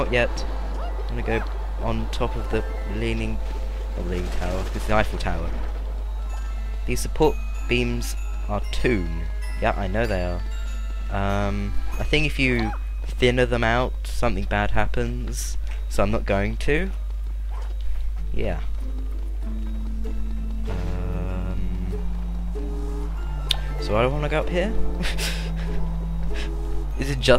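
No technical faults are audible.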